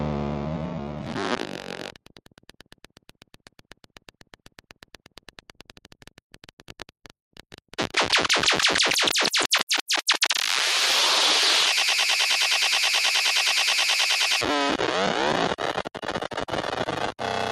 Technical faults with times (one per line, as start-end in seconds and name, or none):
0.00-17.51 noise suppressor applied to music or sounds
0.67-7.96 sound cut by the noise suppressor
11.77-14.41 broken-record loop
15.79-17.24 sound cut by the noise suppressor